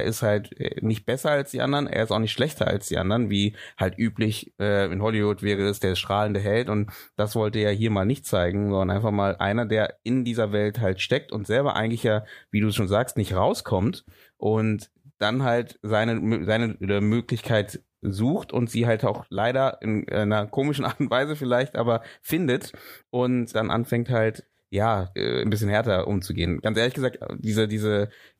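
No technical faults are audible in this recording.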